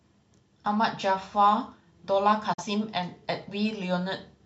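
Digital broadcast dropout at 2.53 s: the receiver muted on failed data, so the speech fades out within 8 ms and stays silent until 2.64 s.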